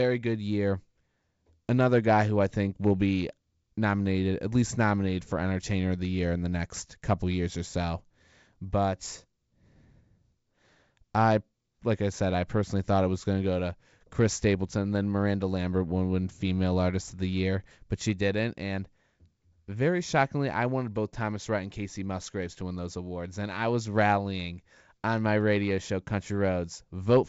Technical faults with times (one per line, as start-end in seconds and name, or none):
none